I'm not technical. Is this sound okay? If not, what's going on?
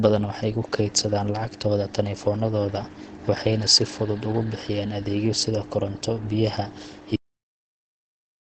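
No. Throughout, the speech sounds muffled and hoarse, with nothing above about 8.9 kHz, likely from Opus compression in its speech mode. It is dull and rough rather than swirly or watery like MP3.

There is also a cut-off end. Right after "sida koronto biyaha", the audio stops dead at 7.16 s mid-sound, with no fade, then stays completely silent.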